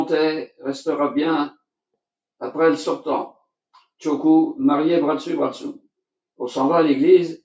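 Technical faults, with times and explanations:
Nothing's amiss here, just the usual sound of call microphone processing, with the deepest bass trimmed and nothing above 8 kHz.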